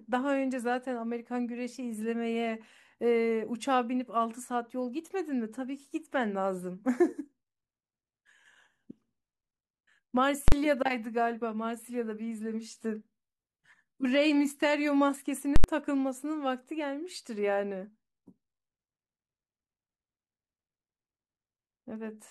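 At 10.48 s there's a hard bang lasting until 10.52 s, a case of invalid numbers at full scale. Some calculation in the chain blew up into infinite or invalid values, and those got clamped to the maximum sample value, so the output is pinned at one extreme value for a 40 ms block. At that length it comes across as a single loud crack rather than anything with shape.

From 11.30 s to 15.30 s you can hear the adaptive stream drop to a lower bitrate. The quality suddenly steps down and codec artefacts come up. It sounds like a step down from something like 96 kbit/s AAC-LC to a 24 kbit/s HE-AAC rendition. The switch happens with no gap, and quality snaps back at 15.30 s.

Right after that, from 15.56 s to 15.64 s, the invalid numbers at full scale come back, this time for an 80 ms block. Because that's longer, you get a sharp pop at the start and another at the end, with silence squeezed in between.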